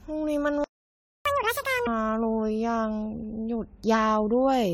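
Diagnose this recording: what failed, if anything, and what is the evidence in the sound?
Codec stage: generation loss throughout. The speech sounds swirly, hollow and smeared, with softened consonant attacks, more damaged than a single AAC-LC encode at 96 kbit/s would leave. The likely cause is repeated decode and re-encode, on the order of ten passes, each requantising on a shifted frame grid.

Playback stage: a playback stall from 0.64 to 1.25 s. The speech cuts to silence for about 0.61 s mid-flow, then resumes where it stopped. It is not a network packet loss, which would skip material. This is most plausibly buffer underrun or a blocked output thread.

Playback stage: catch-up at higher speed from 1.25 to 1.87 s. Right after the stall, the speech runs at 2x speed with pitch raised by roughly ten semitones, then snaps back. The player is resampling its backlog to recover lost time. 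Unlike a sample-rate mismatch, this is brief and tied to the stall.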